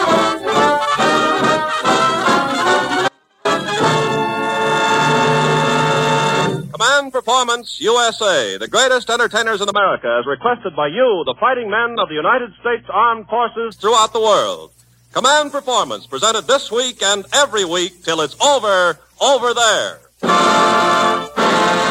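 At 3.08 s the sound cuts out abruptly for about 370 ms, leaving only a faint trace far below normal level, roughly 40 dB down, until it returns at 3.45 s. This is likely an audio dropout to a faint residue, where the signal was lost while the path stayed live. From 9.72 s to 13.72 s the treble suddenly vanishes, with nothing above 3.7 kHz, and the audio turns dull and smeared, without any gap. This points to an adaptive stream at a lower bitrate, consistent with a switch from about 96 kbit/s to 16 kbit/s AAC.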